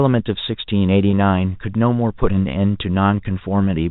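At 1.11 s the speech briefly holds and buzzes, a momentary frozen tone. This is packet loss with pitch repetition: about 20 ms of audio went missing, which fits two lost packets, and the receiver filled the gap by repeating the last pitch period over the G.711 telephone-band signal.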